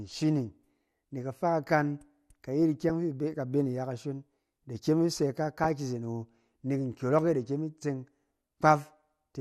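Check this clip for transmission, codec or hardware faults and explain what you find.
Two codec and transmission faults are present in this speech recording.

Throughout, plainly audible MP2 compression, likely from a low bitrate around 80 kbps, sounds dull and gurgling. Layer II starves its 32 sub-bands of bits, switching upper bands off. A spectrogram shows a ragged, flickering top edge with blocky gaps.

DAB burbling occurs from 2.80 to 2.91 s, before "fi ibe ka be", and at 5.64 s, before "ki izen". Bit errors slipped past error correction into the audio data, putting short blips of noise in single sub-bands. Spectrograms show isolated bright band-shaped blotches.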